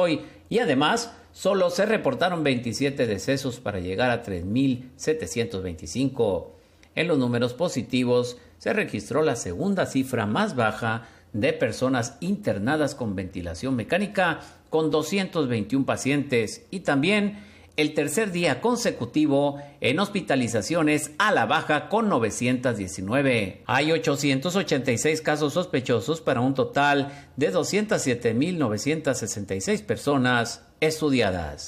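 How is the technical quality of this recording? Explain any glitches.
The technical quality of this recording is sound, with no glitches to explain.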